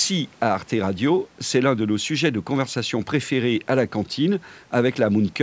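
Speech recorded through a call's microphone processing, whose high-pass filter trims the lowest bass and whose bandwidth stops at about 8 kHz, both normal for that path, with no technical fault to be heard anywhere in the clip.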